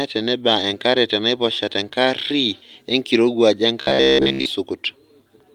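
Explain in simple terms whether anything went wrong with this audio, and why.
From 3.81 to 4.46 s, new audio likely arrived too slowly, so the speech was mostly replaced by replayed 15 ms snippets. This robotic sound from repeated short buffers is a stiff, metallic buzz.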